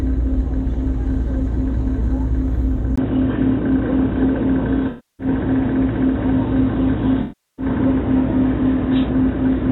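At 2.96 s there is a silence of about 20 ms. After it, the audio turns dull and boxy, with nothing above 3.8 kHz through to the end. Level stays much the same, but a new noise floor appears, far below the signal. This is likely an input switched to a poorer device.

AAC frame loss with concealment hits twice, from 4.89 to 5.27 s and from 7.22 to 7.66 s. Roughly 0.3 s and 0.36 s of data went missing. The decoder patched each gap from the last good spectrum.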